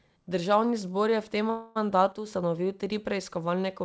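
From 1.50 to 1.78 s the speech stalls into a fading buzz or hiss that holds for about a quarter of a second, then resumes exactly where it stopped, with nothing lost. This is a call audio freeze, most likely late packets draining the jitter buffer, so the gap simply delays everything after it.

From 2.12 to 2.26 s, just before "ustanovil tri", the level abruptly sinks by about 6 dB and then recovers. That step points to one channel dropping out, with the mono sum losing the missing side's half of the shared signal.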